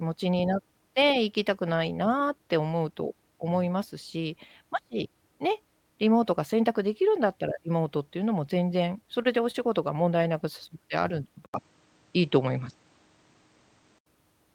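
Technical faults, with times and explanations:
9.22–9.27 s and 9.51–9.56 s, short stall from a late packet: twice a packet arrived late and the jitter buffer emptied, so the last sound was held for about 27 ms and then 29 ms before playback resumed in place. Nothing is lost, but the speech briefly hangs.
11.46–14.06 s, input switched to a poorer device: the speech likely moves to a lesser microphone here, after an 80 ms silence at the switch. The band narrows, so it sounds duller, the level shifts by about 5 dB, and new background noise sits roughly 45 dB below the speech.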